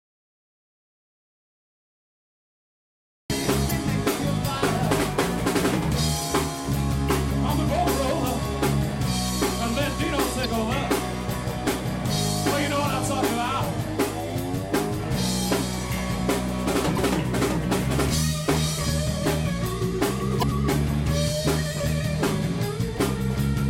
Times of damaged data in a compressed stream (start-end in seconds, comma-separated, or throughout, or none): 3.67-3.72, 10.41-10.46, 16.94-16.98, 20.39-20.43